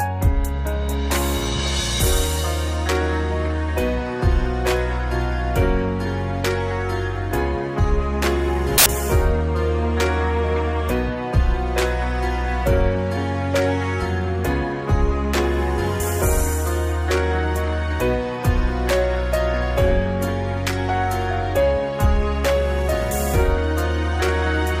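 At 8.78 s a burst of loud noise cuts in and lasts until 8.86 s, about 80 ms. This is samples built from the wrong bytes. For that stretch the reader assembles each sample incorrectly, whether offset by a byte, in swapped order or on the wrong alignment. The rapidly changing low bits end up as the most significant part of every value. The result is harsh, full-band hiss in place of the original sound.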